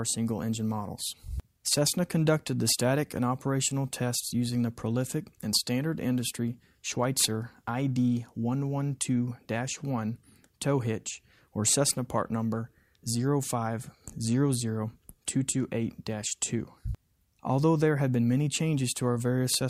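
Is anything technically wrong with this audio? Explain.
No, the signal shows no technical faults anywhere in the recording.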